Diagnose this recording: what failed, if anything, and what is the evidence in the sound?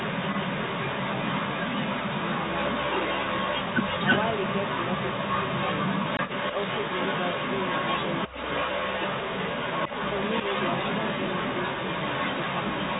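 Throughout the clip a delayed copy of the speech trails it by about 334 ms at roughly 5 dB above the speech's own level: echo leak, likely from a far-end loudspeaker's echo canceller passing its microphone pickup back (call processing).

From 6.17 to 6.19 s the speech drops into a hard-edged 20 ms hole, which fits two lost 10 ms packets: packet loss filled with silence at the network stage.

From 8.28 to 8.35 s the speech dips by roughly 15 dB for about 70 ms, likely speech suppressed in double talk as the echo canceller attenuated both its own talker and the loudspeaker echo.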